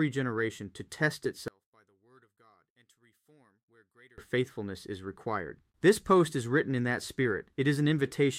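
From 1.48 s to 4.18 s the sound collapses to a faint remnant, roughly 32 dB down, then returns at full level. The likely cause is one channel inverted: with one side's polarity flipped, everything shared between left and right cancels when the two are summed to mono, leaving only their small difference. On a waveform this shows as a sudden, near-flat stretch; a spectrogram shows that span drained.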